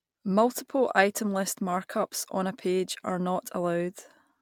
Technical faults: none

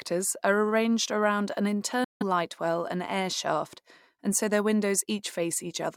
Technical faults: Bluetooth dropout

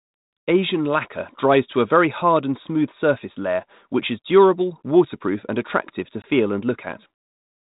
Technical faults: packet loss on an ADPCM call

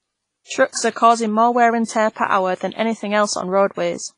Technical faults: WMA compression

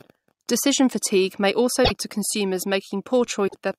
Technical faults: broken MP3 bit reservoir

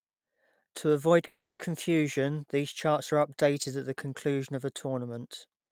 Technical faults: call audio freeze

